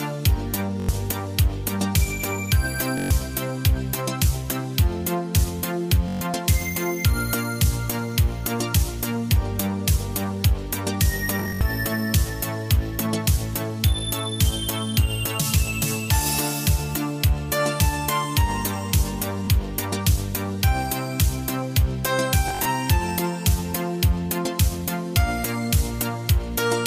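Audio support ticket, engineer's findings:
Bluetooth stutter at 0.80, 2.98, 6.08, 11.40, 19.45 and 22.48 s. Lost packets are covered by buzzy repeats of the last buffer, about 20 to 150 ms each, fitting roughly 21 ms packets.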